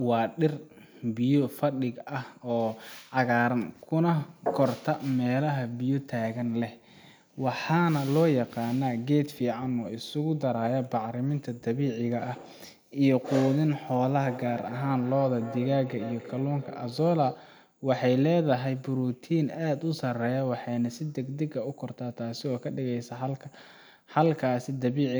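From 14.25 to 17.59 s, feedback echo between two devices: a second device replays the speech into the microphone, returning it about every third of a second, peaking about 14 dB below the speech.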